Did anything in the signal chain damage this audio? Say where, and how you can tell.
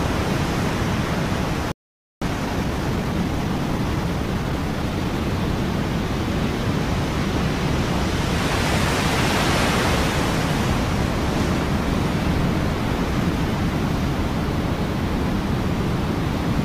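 Yes. At 1.72 s the sound stops dead for about 0.5 s, resuming at 2.22 s. This is a playback stall, most likely the player's buffer running dry or its output thread being blocked, so nothing reached the converter. On a waveform there is a flat line of silence, with no decay tail. A spectrogram shows a clean blank vertical band across every frequency, with sharp edges where the signal halts and restarts.

From 2.22 s to 5.22 s the audio runs about 1.15 times faster while its pitch stays put. This is time-compressed catch-up: after the stall, the player trims its backlog by dropping short slices and cross-fading across the joins. On a spectrogram, harmonics keep their frequencies while events arrive closer together. The waveform shows small irregular seams where segments were spliced.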